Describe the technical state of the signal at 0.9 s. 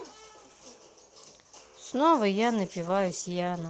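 At 0.9 s the speech is intact, with no fault present, and what is heard there is simply the call path's Opus coding, which limits the audio band to about 8 kHz.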